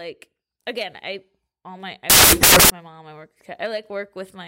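From 2.10 s to 2.70 s the speech gives way to a burst of loud, harsh broadband noise. These are samples built from the wrong bytes. Each sample's bytes were put together wrongly, through a swapped order, a one-byte offset or a mismatched alignment. As a result the rapidly fluctuating low-order bits took the place of the significant ones. For that 0.6 s stretch, the values bear almost no relation to the original waveform.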